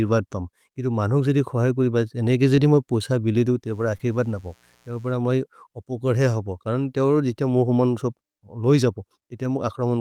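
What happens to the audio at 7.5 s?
Nothing goes wrong at 7.5 s; the speech carries on intact through that moment with no dropout, glitch or distortion.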